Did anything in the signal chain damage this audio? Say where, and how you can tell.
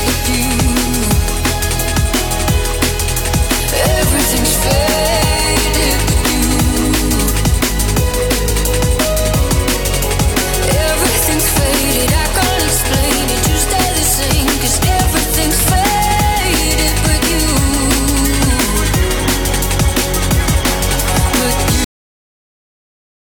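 Yes. The damage sits at the storage or playback stage, and it shows as a cut-off end. At 21.84 s the sound stops mid-event. There is no decay and no fade. The signal drops straight to digital silence and stays there for the last 1.4 s. That pattern means the final buffers were never written to the file or never reached the output. The audio was truncated before it finished, rather than ending naturally.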